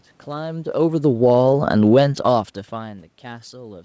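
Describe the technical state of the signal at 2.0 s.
At 2.0 s, automatic gain falling, running from 0.73 to 2.53 s, overlaps automatic gain rising, which starts at 1.32 s and lasts to the end of the clip. The falling stage is the gain control reacting to an input it judged too loud. It pulls its gain down gradually by about 6 dB, so the voice and the room noise behind it sink together rather than the voice alone getting quieter.

The rising stage is a response to the input dropping by about 23 dB, as the talker moves back from the microphone around this point. The control then slowly lifts its gain to compensate, and the voice and background swell upward together over a second or more. At 2.0 s the level is therefore still settling between these two opposing adjustments.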